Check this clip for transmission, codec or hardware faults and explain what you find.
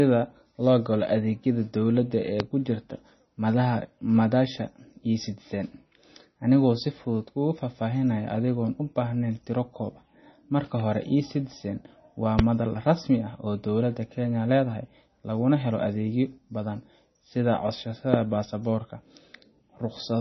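Two faults are audible in this speech: heavy codec damage throughout, and three loud pops.

Across the whole clip the speech sounds dull and watery, with a swirling, metallic edge on sibilants and softened consonant attacks. Nothing is present above 5.9 kHz. This is likely MP3 compression at a very low rate, which fits a bitrate of roughly 24 kbps. Starved of bits, the encoder cut the treble at a fixed frequency and discarded weaker spectral lines, which then flicker in and out between frames.

Three sharp, brief pops, each about 20 dB louder than the speech, land at 2.40 s, 12.39 s and 18.14 s. Each lasts only a couple of hundredths of a second, and the speech carries on beneath it. This loud pop is likely an electrical transient, a sudden voltage step or spike from a connector, switch, static discharge or driver glitch, added on top of the signal and shaped by the circuitry downstream.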